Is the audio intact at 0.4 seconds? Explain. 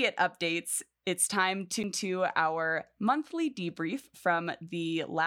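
Yes, the audio is intact at 0.4 seconds, with no dropout, click, distortion or other fault audible at that moment.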